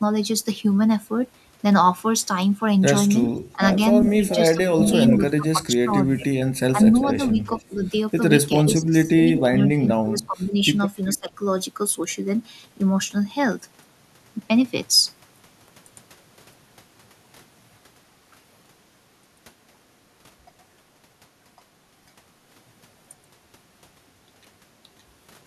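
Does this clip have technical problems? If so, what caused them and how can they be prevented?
Yes. From 3.24 to 7.62 s there is an echo leak. A copy of the speech returns about 400 ms late, about 10 dB down. Likely cause: the far end's echo canceller missed loudspeaker pickup. At 11.1 s a fainter scrap returns, about 20 dB down. Prevention: use headsets or better echo cancellation.

Speech suppressed in double talk dips the talker at 3.54–3.62 s, 4.55–7.82 s and 8.74–11.32 s. Drops reach about 15 to 25 dB, in pieces. Likely cause: overlapping talk confused the echo canceller. Prevention: use headsets or a canceller with better double-talk handling.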